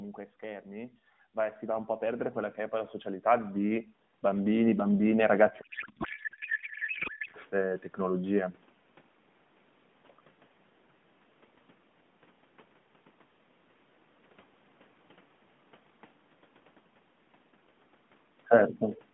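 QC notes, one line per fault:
0.4–5.51 s, automatic gain rising: the call's automatic gain control judged the input too quiet and kept raising its gain, by about 20 dB over roughly five seconds. Because the gain is applied to the whole signal, the voice and the room background grow louder together in a slow, steady swell rather than a sudden jump. Nothing in the sound itself gets louder; only the amplification climbs.
5.62–7.36 s, codec payload misread: the receiving side unpacked AMR frames that were packed octet-aligned as if they were bandwidth-efficient, so every field lands in the wrong bit positions. The decoder still accepts the frames as valid, but it builds its vocal-tract model from the wrong parameters. The speech gives way to garbled noise and warble that barely tracks the talker. Normal decoding returns once both ends agree on the packing at 7.36 s, within the narrow 150 Hz to 3.5 kHz band of a mobile line.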